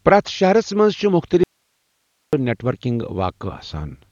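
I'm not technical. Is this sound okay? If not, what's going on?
No. The speech appears to have likely been squeezed hard by Dolby Digital compression at too low a setting, so the encoder threw away the upper range and much fine detail. Throughout, the voice sounds dull and muffled, with nothing above 7 kHz, and a rough, fluttering grain.

There is also an audio dropout to a faint residue. The signal was likely lost for just under a second while the line stayed open. From 1.44 to 2.33 s the voice vanishes abruptly, leaving only quiet hiss, then returns at "نیٹ ورکنگ".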